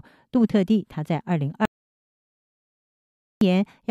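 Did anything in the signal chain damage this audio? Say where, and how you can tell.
Yes. At 1.65 s the speech cuts off mid-flow and nothing returns until 3.41 s, an audio dropout to silence lasting about 1.76 s. The gap is silent with no room tone, so on a waveform it is a flat line and on a spectrogram a fully black band. The likely cause is input lost upstream, such as a disconnected device, failed link or stray mute, while the recorder kept writing zeros; whatever was said then is gone.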